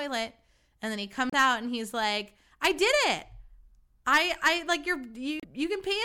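Damaged data in the compressed stream hits this speech twice, from 1.30 to 1.35 s and from 5.40 to 5.44 s. Corrupted bytes throw the decoder off, it loses frame sync and hunts for the next header, and each spot comes out as a short glitch of about 50 ms.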